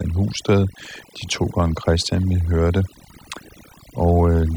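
A speech recording suffers from overdone noise removal from start to finish: the noise reduction was pushed so hard that any frequency band sitting close to its noise estimate gets pulled down or shut off entirely, taking the softer parts of the voice with it. The background collapses into near silence sprinkled with twinkling specks. A spectrogram would show scattered isolated dots in otherwise empty gaps and ragged, hollowed-out speech harmonics.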